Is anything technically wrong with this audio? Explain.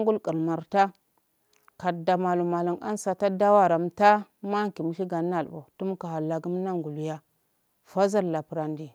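No, nothing technically wrong can be heard in this speech clip. There are no faults to point to anywhere in it.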